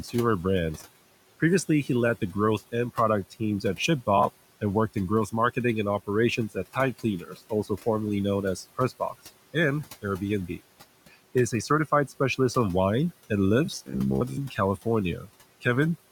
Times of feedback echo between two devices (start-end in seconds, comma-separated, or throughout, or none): none